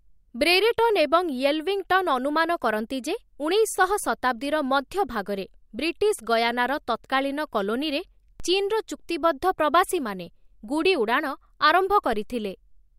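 At 8.40 s and again at 12.13 s the speech carries a DC step: the waveform's zero line jumps abruptly by about -27 dBFS, as when a converter recalibrates or an offset input is switched in. Each offset then bleeds away through a high-pass near 2 Hz, a slow decay of roughly 80 ms. Each step is heard as a single low thump, while the speech continues unaltered.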